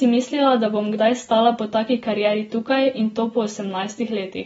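Dull, band-limited speech runs the whole length of the clip, with nothing above about 7.6 kHz and a smeared, watery texture that is plainly audible on sustained sounds and sibilants. The likely cause is AAC compression: an AAC-LC encoder short of bits has lowered its cut-off and quantised the remaining spectrum coarsely, leaving gaps and noisy fill that warble from frame to frame. The damage fits a bitrate of roughly 27 kbps.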